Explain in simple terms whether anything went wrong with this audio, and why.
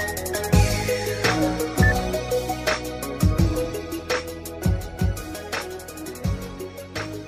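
Nothing went wrong with this audio from a technical point of view. At no point does anything happen to the sound that would signal a fault in how it was recorded or handled.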